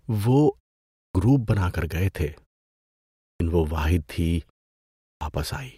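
Speech that shows a clipped start after a pause three times. The output device appears to drop into a sleep state during silences and loses the first part of the sound while it wakes. After a 0.35 s pause, about 0.28 s is lost at 0.87 to 1.15 s, just before "گروپ بنا کر گئے". After 0.73 s of pause, 0.29 s goes at 3.11 to 3.40 s, just before "وہ واحد تھی". After 0.51 s, 0.28 s is lost at 4.93 to 5.21 s, right after "وہ واحد تھی". On a waveform or spectrogram, each onset starts as a hard vertical edge out of silence, with no rising attack.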